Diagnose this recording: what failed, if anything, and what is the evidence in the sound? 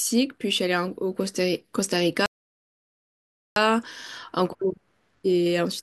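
A rebuffering stall at the playback stage interrupts this speech clip. At 2.26 s the sound drops to silence and stays there until 3.56 s, then carries on from exactly the point where it broke off, so nothing is skipped but about 1.3 s is added. The player drained its downloaded audio and waited for more to arrive. On a waveform this is a flat line; on a spectrogram, a fully blank vertical band with clean edges on both sides.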